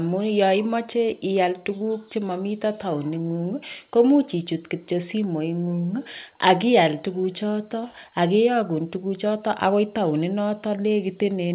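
Nothing stood out on listening to this speech, which comes through a call path whose audio stops at about 4 kHz.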